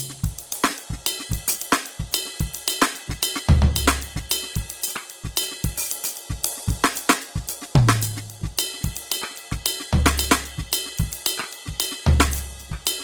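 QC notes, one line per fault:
Throughout, Opus compression: the damage is plainly audible, with tones turning noisy, rough and grainy, while content still reaches about 20.2 kHz, so the bandwidth is not narrowed. The likely cause is Opus in its music (CELT) mode at a rate that fits about 16 kbps. It preserves each band's energy, but bands short of bits are filled by folding lower bands or with noise, which replaces clean tone with grain.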